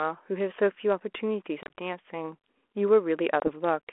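Packet loss on an ADPCM call hits at 1.63 to 1.71 s, where about 80 ms of audio drops out in several hard-edged silent gaps spread across some 140 ms, the longest about 30 ms. It strikes again at 3.4 to 3.5 s with about 20 ms lost. Silence fills each hole, so the receiver's adaptive predictor and step size lose track of the sender's. The speech comes back with brief, slight distortion, over a light, band-limited telephone sound that fits 32 kbit/s G.726.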